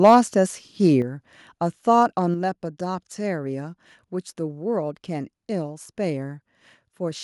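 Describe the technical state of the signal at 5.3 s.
At 5.3 s the speech signal is intact, with no dropout, clipping, distortion or other fault to be heard at that point.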